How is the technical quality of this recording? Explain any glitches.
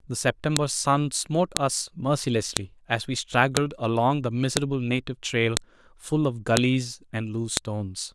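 The technical quality is compromised by one recurring fault. The speech was assembled from one-second WAV pieces whose headers were never stripped, so each header's bytes play as samples: a file header played as audio. A sharp, loud click lands at 0.57, 1.57, 2.57, 3.57, 4.57, 5.57, 6.57 and 7.57 s, regardless of the speech.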